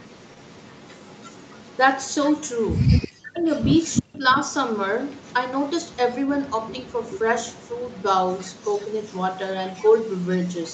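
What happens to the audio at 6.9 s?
At 6.9 s the speech is inside an echo leak running from 3.81 to 7.29 s, likely caused by a far end on loudspeaker whose echo canceller let part of its microphone pickup return down the line. The result is a faint second copy of the speech trailing the original by 354 ms and sitting around 20 dB below it, so the speech is shadowed by a quiet repeat.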